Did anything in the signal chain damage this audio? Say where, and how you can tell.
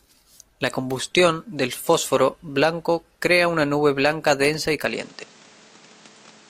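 Yes: from 4.86 s the speech stops above 9.1 kHz and gains new background noise with no gap, unlike a codec change, likely an input switched to a poorer device.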